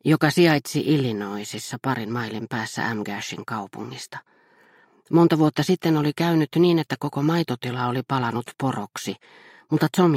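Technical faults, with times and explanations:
No technical faults can be heard anywhere here.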